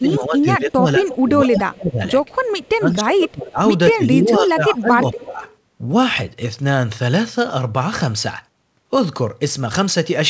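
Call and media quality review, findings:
Speech suppressed in double talk. Four stretches of level drop: 0.01–1.05 s (about 15 dB deepest), 1.37–2.01 s (about 25 dB), 2.77–3.6 s (about 20 dB), 3.91–5.42 s (about 15 dB). Affected time roughly 0.7, 0.5, 0.7 and 1.5 s. Likely cause: the echo canceller. It confused the near talker with loudspeaker echo during double talk and attenuated both.

Echo leak. A delayed copy of one voice returns at 1.06–1.23 s (199 ms late, about 15 dB below speech), at 2.28–2.69 s (199 ms, about 35 dB below) and at 5.42–5.56 s (227 ms, about 30 dB below). Likely cause: the loudspeaker side's echo canceller. It left residual echo in its microphone signal, which was sent back. The call path shows nothing above 8 kHz, which fits G.722 at 64 kbps.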